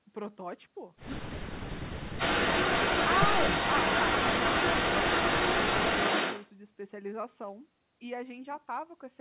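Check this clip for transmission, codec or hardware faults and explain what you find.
Two faults stand out in this speech clip, both from echo control on the call; the narrowband sound, with nothing above 4 kHz, fits an ordinary G.711 A-law path at 64 kbps.

From 1.23 to 1.69 s the speech is suppressed in double talk: the echo canceller likely mistook overlapping talk for echo and cut gain by about 40 dB. The voice dips, loses its high end or cuts out in pieces.

From 2.18 to 6.53 s an echo leak returns the voice 255 ms late, about 5 dB relative to the speech, likely through incomplete cancellation. It is a distinct repeat, not diffuse room reverberation.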